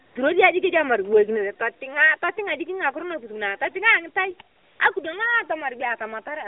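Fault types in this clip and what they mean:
AMR comfort noise: the phone decided nobody was talking and stopped sending speech frames, so the receiving end filled the gap with made-up noise built from a rough sketch of the background's level and spectral shape. You can hear the real background swap for a smooth, even hiss from 0.06 to 0.16 s and again from 4.56 to 4.80 s, switching in and out, all inside the already narrow, lightly coloured phone band.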